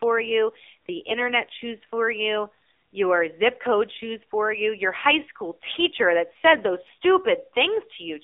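Throughout, the speech carries AMR narrowband mobile codec coding. The band runs only from 250 Hz to 3.6 kHz, so a spectrogram shows a hard ceiling with nothing above. The low bitrate, which fits the 7.4 kbps mode, makes the voice plainly buzzy and synthetic.

From 1.10 to 1.25 s, between "you the" and "choose for you your", AMR bit errors strike. Flipped bits, a few percent of them, misplace the pulses that drive the voice model. Pitch and level hold, but the sound turns hoarse and gargly. A spectrogram shows smeared, scratchy harmonics across a span that fits about seven 20 ms frames.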